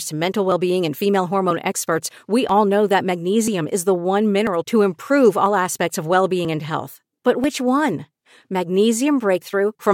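Something on the system is blocking the USB bus or audio driver at a steady interval of 0.99 s, producing periodic USB or driver dropouts from 0.52 s through 9.42 s. At each stall roughly 10 ms of the speech is skipped outright rather than padded with silence, so the waveform jumps across the gap. About ten of these land in the span, heard as evenly spaced ticks or small pops that cut into the speech at a clock-like rhythm.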